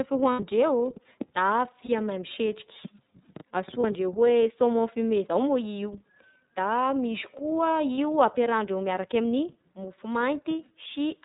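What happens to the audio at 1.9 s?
A lost iLBC frame hits from 1.86 to 1.89 s, a 30 ms gap. The decoder repeats the last pitch cycle with noise, giving a brief buzzy, held sound. The speech recovers at once. Throughout, the iLBC codec limits the sound to narrowband, with nothing above 4 kHz. It sounds plainly rough and synthetic, which fits 30 ms frames at about 13.3 kbps.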